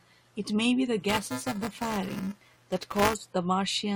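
From about 1.09 to 3.14 s there's buffer tearing: a 375 Hz robotic buzz, fitting a 128-sample buffer, where roughly a tenth of each period replays audio about 5 ms stale.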